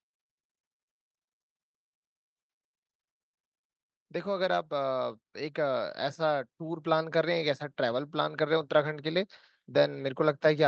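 From 4.23 to 6.01 s you can hear automatic gain rising: the gain control decided the speech was too quiet and pushed its gain up by about 5 dB, so voice and background swell together.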